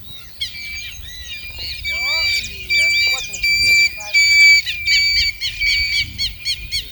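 No technical faults can be heard in this audio.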